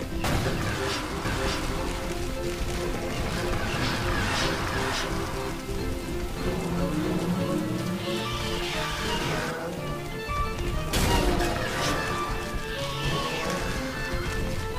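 From 1.25 to 9.51 s a doubled audio track sits half a second behind, equally loud, likely from a second capture path; waveform shows repeated shapes, spectrogram duplicated patterns, abrupt start and stop.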